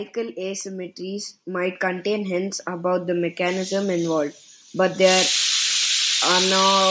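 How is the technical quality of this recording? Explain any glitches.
One glitch stands out in the speech. Automatic gain rising, from 0.13 to 3.35 s: the control judged the input too quiet and raised gain about 9 dB, so voice and background swell together until "involved but they".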